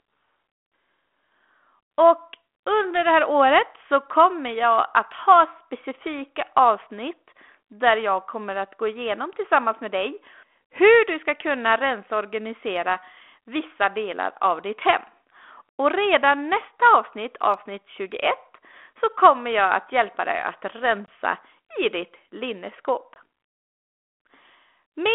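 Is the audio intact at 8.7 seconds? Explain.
Yes, at 8.7 seconds the speech is intact, carried through a 32 kbit/s G.726 ADPCM telephone channel with its usual 300 Hz to 3.5 kHz band and only light coding damage.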